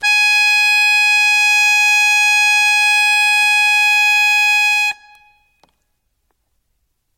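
From start to finish the music carries generation loss, likely from around seven rounds of MP3 decoding and re-encoding at roughly 60 kbit/s. Every pass quantised afresh on a shifted frame grid, so noise and spectral gaps stacked up: the sound is swirly, hollow and smeared, transients blur, and nothing reaches above 16 kHz. A single low-bitrate encode would sound thin, but not this cumulatively washed-out and phasey.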